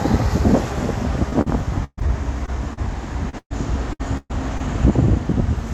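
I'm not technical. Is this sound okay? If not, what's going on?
No. From about 1.29 to 4.61 s there is repeated packet loss: about a dozen chunks of the audio went missing in transit, the longest roughly 0.13 s. Each hole was patched by stretching the previous sound, so this stretch sounds choppy and robotic.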